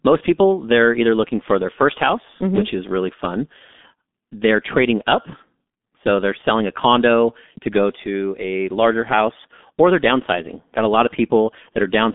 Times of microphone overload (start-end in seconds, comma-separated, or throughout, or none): none